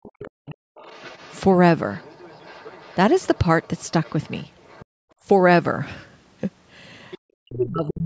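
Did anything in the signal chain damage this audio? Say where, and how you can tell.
Yes. The damage sits in the call processing, in the echo canceller. From 0.0 to 0.6 s, and again from 7.4 s to the end, the speech dips hard, by something like 40 dB. This is likely speech suppressed in double talk. Both sides spoke at once, and the canceller turned everything down.

A second, fainter voice runs under the talker from 0.23 to 1.4 s, 1.92 to 4.85 s, 7.11 to 7.18 s and 7.56 to 7.93 s. It is well below the main speech and is loudest near the end. This is likely the other side's voice leaking through, meaning loudspeaker echo the canceller failed to remove.

From 4.85 to 5.2 s the room sound collapses by about 40 dB and then returns. That is background gated by the echo canceller. It clamped the microphone while the loudspeaker played and released it again.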